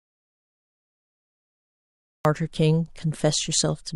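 A speech clip that opens in dead silence, with no room tone at all, until the voice comes in abruptly at 2.25 s. This audio dropout to silence is already under way when the clip begins, likely from the input being lost while silence was still being recorded.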